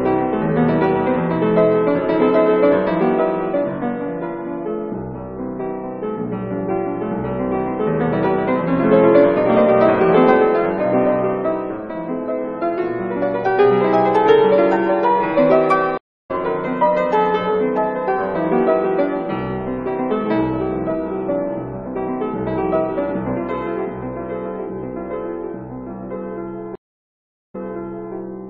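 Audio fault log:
15.98–16.31 s, stream reconnect: the connection dropped, leaving about 0.3 s of silence. A fresh decoder then picked up the live stream roughly a third of a second further on, so that stretch of audio is skipped.
26.75–28.14 s, stream reconnect: 0.76 s of silence, then playback resumes 0.63 s earlier. The server resent a burst after reconnecting, so that portion is heard twice.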